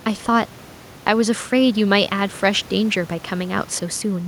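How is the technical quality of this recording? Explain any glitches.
Nothing stood out on listening to this speech recording, with only a faint room noise sitting about 25 dB below the voice.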